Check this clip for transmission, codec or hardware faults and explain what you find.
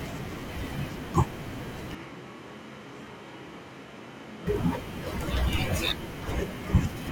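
One fault stands out. From 1.95 to 4.47 s the speech abruptly turns hollow, thinner and about 5 dB quieter with faint room noise, likely a switch to a distant microphone hearing more of the room.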